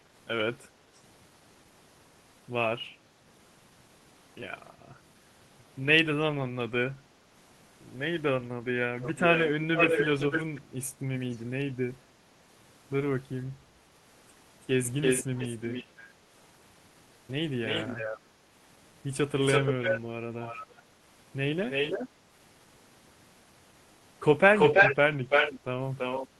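Echo leak shows up from 9.02 to 10.6 s, again briefly at 11.32 s, then at 15.01–16.05, 17.65–18.2, 19.41–20.82, 21.69–22.09 and 24.55–26.27 s. A delayed copy of the speech trails behind, about 494 ms late in the first two and about 334 ms late afterwards. It's mostly as loud as the speech itself, and near the end even a bit louder, though the 11.32 s scrap is faint. It's likely a far-end loudspeaker leaking into the microphone past the echo canceller.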